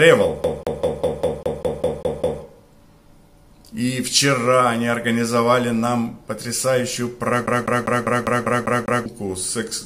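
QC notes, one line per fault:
0.43–2.43 s: CD stuck on one turn. The same 0.2 s slice of sound plays 10 times in a row, with a brief mute at each jump, as a scratch keeps knocking the laser back one track on every rotation, giving a rapid, perfectly regular stutter.
7.46–9.06 s: CD stuck on one turn again, with the identical 0.2 s loop repeating 8 times. The laser is thrown back at the same point on each revolution, so the repeat rate matches the earlier run exactly.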